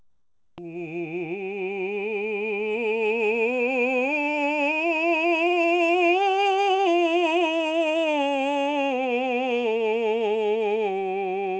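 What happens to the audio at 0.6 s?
Comfort noise in place of the background runs from 0.0 to 0.58 s, ending just before 0.6 s. During that stretch the music's real background gives way to a steady, featureless hiss about 19 dB quieter. This is likely discontinuous transmission: the sender stops sending, and the receiver fills the gap with synthetic noise.

Onset clipped by the voice detector covers 0.45 to 0.58 s, so the music returns abruptly at about 0.6 s without its soft beginning. The sender's detector was likely slow to register the returning sound, leaving 130 ms unsent and replaced by that noise.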